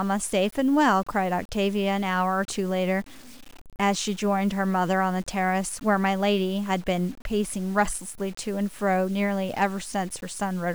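A speech clip with grainy, signal-following distortion throughout, heard as grit on quiet passages and dropping out or sputtering on the faintest sounds. It points to low bit depth without dither, likely truncation to about 7 bits, leaving error only around 25 dB below the speech.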